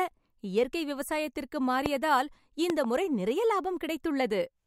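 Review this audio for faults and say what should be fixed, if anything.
Two loud pops, sharp clicks well above the speech (about 15 dB), land at 1.86–1.88 s, just after "இயற்கை விவசாயத்திற்கு", and as a double pop at 2.70–2.86 s. They are likely voltage spikes from a plug, switch or static discharge. Secure cables and switch hardware only while muted to prevent them.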